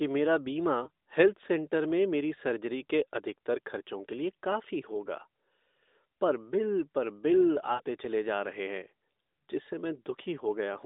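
Lost AMR speech frames in this speech clip, at 0.84 to 0.90 s before "हेल्थ सेंटर में मेरी" and at 7.74 to 7.82 s before "चले जा रहे हैं". After failed checksums, the decoder repeated its last pitch and vocal tract settings at falling gain. That gives a brief dip or warble at the first gap, which fits one lost frame. The second gap is a smeared, fading 60 ms stretch, about three frames, over narrowband AMR audio limited to 250 Hz to 3.7 kHz.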